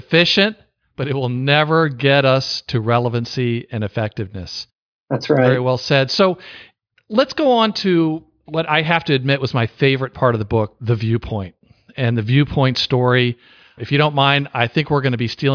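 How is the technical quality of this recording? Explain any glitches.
No technical faults can be heard in this speech recording. There are no glitches to explain.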